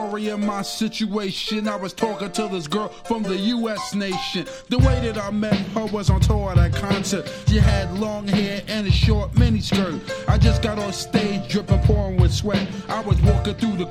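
No technical faults can be heard anywhere in the audio, and the signal stays intact and steady throughout.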